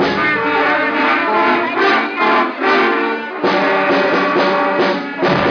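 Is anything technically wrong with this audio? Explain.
No, nothing technically wrong stands out here; it all sounds perfectly fine to the ear.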